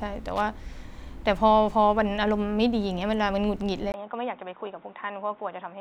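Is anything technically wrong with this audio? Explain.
Yes, there are two problems.

From 0.36 to 0.48 s there's a burst of loose connector crackle. A worn or dirty contact is making and breaking as it shifts, so the signal gets chopped into fragments, and any DC sitting on the line turns each break into a little pop. You hear it as a short, scratchy, irregular crackle laid over the speech for about a tenth of a second.

At 3.92 s, after a tiny gap of about 20 ms, the sound turns dull and boxy and stays that way to the end. That's most likely the input switched to a poorer device, such as a different mic or a headset's call profile. Nothing comes through above 3.8 kHz, the level drops by roughly 5 dB, and new background noise appears, sitting something like 35 dB under the speech.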